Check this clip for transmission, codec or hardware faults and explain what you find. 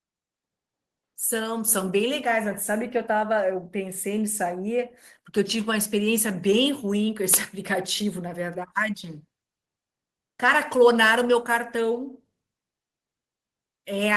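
One fault stands out: the microphone volume stepped up at 1.68 s. Level jumps about 6 dB in a single step as the input gain is raised at the device, lifting speech and background noise together. A speaker leaning closer would raise the voice alone, and gradually.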